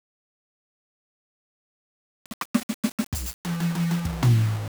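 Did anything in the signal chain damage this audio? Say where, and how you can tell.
Yes. The music is grainy from start to finish, with a rough distortion that rides on every sound, thickening as passages get quiet and sputtering between two steps or dropping out as decays fade. The error sits only about 20 dB below the music. The likely cause is a sample-format conversion to low bit depth without dither: the audio was rounded to about 5 bits, so the quantisation error tracks the signal instead of forming a steady hiss.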